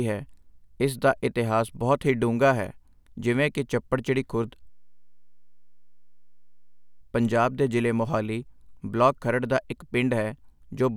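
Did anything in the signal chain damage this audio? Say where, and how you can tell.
Yes: a system hang loop in the driver buffer from 4.7 to 7.01 s, after "ਜਿਵੇਂ ਕਿ ਚੱਪੜਚਿੜੀ ਖੁਰਦ". The hardware kept replaying one 10 ms slice, producing a steady 100 Hz buzz.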